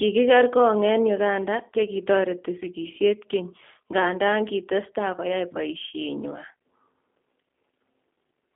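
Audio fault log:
throughout, G.729 codec: the speech sounds thin, slightly rough and synthetic, with the plainly audible coarseness of a low-rate phone call. Nothing is heard above 3.5 kHz, and the low end is thin below about 250 Hz. The coder rebuilds each 10 ms frame from a vocal tract filter, a pitch predictor and a few pulses instead of the actual waveform, which fits an 8 kbit/s G.729A stream on a narrowband telephone line.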